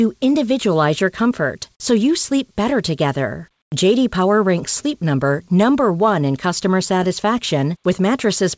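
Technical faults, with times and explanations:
3.62 to 3.72 s, comfort noise in place of the background: Just after "you sleep better together", the quiet background gives way for 100 ms to a steady, featureless hiss. Its level shifts by about 11 dB. The background there sits about 55 dB below the loudest speech, so it is faint. The likely cause is discontinuous transmission. The sender judged the gap silent and stopped sending. The receiver then filled it with synthetic noise, here band-limited to 8 kHz by the G.722 call path.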